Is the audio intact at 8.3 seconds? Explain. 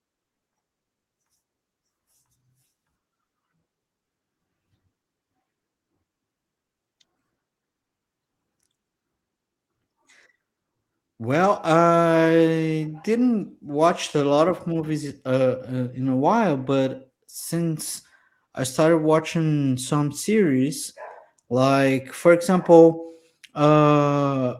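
Yes, the speech at 8.3 seconds plays through intact, with no dropout, click, distortion or other fault at that moment.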